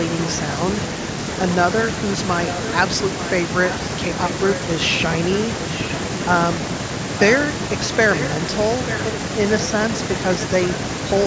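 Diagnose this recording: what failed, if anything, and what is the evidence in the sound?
At 3.69 to 3.75 s a short, faint copy of the speech surfaces, trailing the original by 891 ms and well below it in level. This is likely an echo leak in call processing: the far-end echo canceller let some loudspeaker pickup return.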